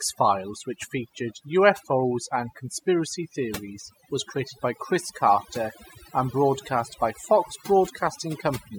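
Overdone noise removal runs through the whole speech clip. A noise reduction stage was pushed too hard on a noisy recording. It drives individual frequency bands deep down or off whenever they sit near its noise estimate. Quieter parts of the voice get caught and removed along with the noise. The background drops, dotted with twinkling, chirpy specks. The voice is missing its softer detail.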